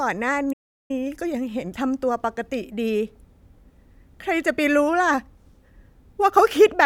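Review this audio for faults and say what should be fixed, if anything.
Playback stall from 0.52 to 0.91 s: the speech cuts to silence mid-flow for about 0.37 s. The likely cause is the player's buffer running dry or its audio thread being blocked, so no samples reached the output until it recovered. Preventing it calls for a deeper playback buffer and an audio thread that is never blocked by other work.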